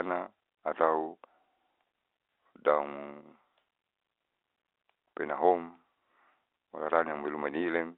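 No technical faults can be heard anywhere in this speech clip. It carries the narrow sound of a G.711 telephone line, with the band running from about 300 Hz to 3.6 kHz and any coding damage at most faint.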